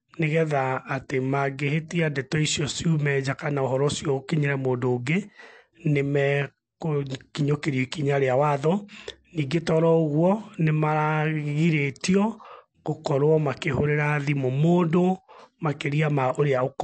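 Throughout the speech, the sound is watery and swirly, sibilants turn metallic and chirpy, and nothing is left above 8.3 kHz. This is likely MP3 compression at a starved bitrate, around 48 kbps, with the encoder cutting the treble and flickering weak frequency lines on and off.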